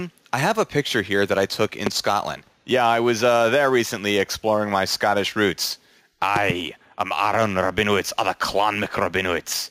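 Gain pumping runs through the whole clip. The level swings by roughly 5 dB as loud sounds pull it down. The likely cause is input gain set too high, with a fast limiter repeatedly pulling the level down, which squashes the dynamics.

A loud pop lands at 1.87 to 1.89 s, and a double pop follows at 6.36 to 6.52 s. Each stands about 15 dB above the signal, and the sound continues underneath. A voltage step from a plug, switch, static or driver glitch is the likely source.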